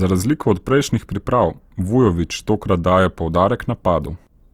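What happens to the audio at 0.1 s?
At 0.1 s you're hearing Opus compression, and it isn't confined to that moment: it runs through the whole clip. The speech keeps its full bandwidth, up to about 20.2 kHz, but it sounds rough and grainy. That points to Opus in its music mode, likely at a tight rate around 24 kbps. It holds each band's energy but fills thin bands with folded or noise-like content, so the tone turns noisy rather than swirly.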